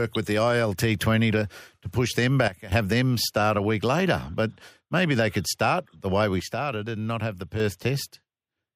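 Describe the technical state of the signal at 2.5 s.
At 2.5 s the signal is inside a sudden gain jump, running from 2.48 to 2.72 s. It starts right after "to to push them" and ends before "have them start a". The level drops by about 14 dB in a single step, with no fade. The speech and the background noise fall together, then return just as abruptly. The likely cause is a digital gain change applied between two samples without a ramp.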